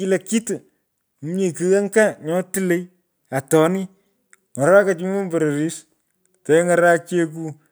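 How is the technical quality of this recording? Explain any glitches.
No glitches or technical faults are audible here.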